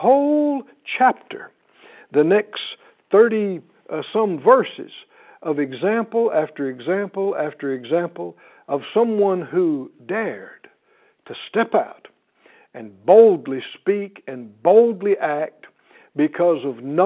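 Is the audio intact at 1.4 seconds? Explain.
Yes, the speech at 1.4 seconds is intact, carried through the usual band-limited telephone coding with nothing breaking into it at that moment.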